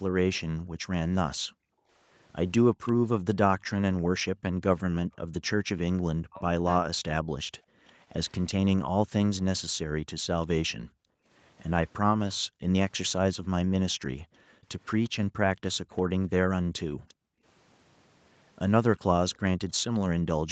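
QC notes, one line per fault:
0.34–2.92 s, 7.38–8.51 s and 15.04 s to the end: echo leak. A faint delayed copy of the speech trails the main signal by about 351 ms, sitting roughly 25 dB below it in the first and last runs and closer to 35 dB below in the middle run. The likely cause is a far end playing the call on a loudspeaker, with its echo canceller failing to remove all the acoustic pickup, so the residue returns.
0.47 s to the end: background gated by the echo canceller. The room tone does not run steadily but dips and drops out, at its deepest by about 40 dB, then recovers. This happens because the canceller clamps the microphone hard whenever the loudspeaker is active and releases it afterwards. The ambience therefore dips in step with the far-end activity rather than holding a constant floor.
6.22–6.84 s: speech suppressed in double talk. Within this window the talker's speech drops away in pieces, totalling about 0.4 s, with the deepest cuts around 40 dB down. 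The likely cause is both sides speaking at once, leaving the echo canceller unable to distinguish local speech from loudspeaker echo, so it attenuated both. The result sounds like brief gaps torn out of the talker.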